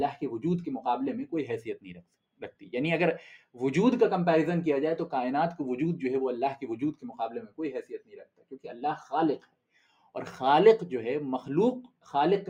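Throughout, the sound pumps and thins as its level swings by around 5 dB: a noise suppressor built for speech was left on and treats steady parts as noise. Between 1.77 and 2.7 s, 7.83 and 8.82 s, and 9.38 and 10.15 s, sustained sound sinks sharply, by about 18 dB at its deepest, as the suppressor cuts sound it mistook for noise.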